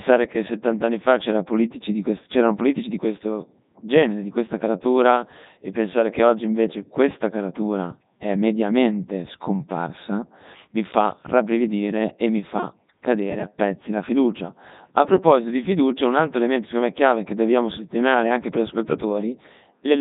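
Speech, run through the Codec 2 vocoder for its whole length, and it's heavily damaged: robotic, buzzy, rebuilt from sine waves off pitch and envelope data rather than the real waveform. Nothing above 3.8 kHz, which fits Codec 2's 3.2 kbit/s mode.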